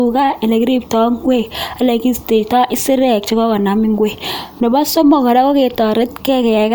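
No technical fault can be heard anywhere in the recording. There is nothing to point to at any moment and nothing that needs a technical explanation.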